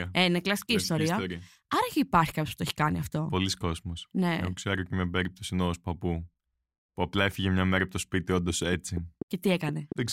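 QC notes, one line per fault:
8.50–9.93 s, train of clicks: Just after "από το σπίτι όντω", a run of about seven sharp clicks starts. They come at a steady 4.2 per second. Each has much the same shape. They peak about 10 dB above the speech, so they tick over the words and into the gaps. The even pace and repeated shape point to an outside pulse riding on the signal, likely interference from nearby equipment or a faulty connection or power supply.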